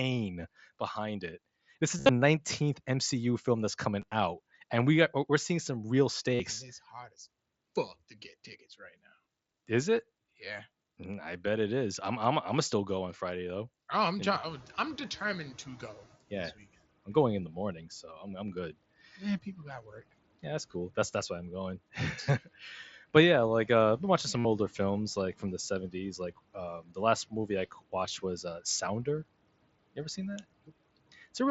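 Speech recorded through a Bluetooth headset on the mSBC wideband codec, with band-limited audio topping out near 8 kHz. Concealed Bluetooth headset packet loss occurs at 1.97–2.09 s (105 ms lost within 120 ms, longest run 60 ms), 4.01–4.12 s (60 ms scattered over 105 ms), 6.35–6.40 s just after "we're seeing some real", and 24.39–24.45 s between "uh I've been watching" and "older films like from". The receiver patched each gap by repeating a short stretch of recent waveform, so the longer runs buzz at steady level and warble on recovery; a spectrogram shows evenly spaced harmonic stripes with smeared onsets. When the room noise jumps by about 17 dB around 14.5 s, the noise suppressor is caught catching up from 14.42 to 16.16 s. Its noise estimate needs about 1.74 s to adapt, so the noise arrives loud and then sinks by roughly 12 dB, visible as a broadband floor that fades over that span. 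Speech cut by the noise suppressor appears at 26.81–26.97 s (dropping about 15 dB) and 27.71–27.93 s just before "was uh" (about 16 dB). The suppressor mistook brief quiet speech for noise, leaving swallowed syllables that show as sudden dips in the waveform envelope and gaps in the spectrogram's energy.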